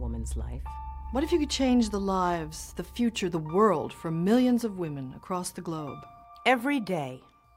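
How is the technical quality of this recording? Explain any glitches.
No glitches or defects can be heard anywhere in the recording, so there is nothing to explain.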